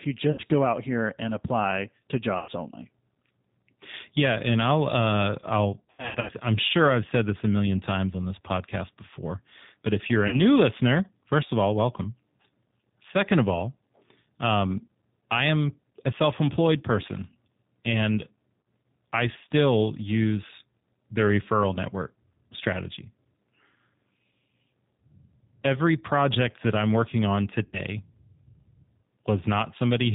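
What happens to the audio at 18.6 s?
At 18.61 to 18.65 s the sound smears into a brief stretched sound that fades in level, then takes a moment to recover its clarity. This is VoIP packet loss concealed by the speech codec: about 40 ms of audio, consistent with two lost packets, went missing, and the decoder filled the gap by repeating its last pitch and vocal-tract shape at falling gain.

That moment sits within speech that is slightly rough and synthetic throughout, with nothing above 4 kHz. This comes from the G.729 codec, here the G.729A variant at 8 kbit/s. It rebuilds each 10 ms frame from a filter, a pitch predictor and a few pulses, which also explains why recovery after the gap is gradual.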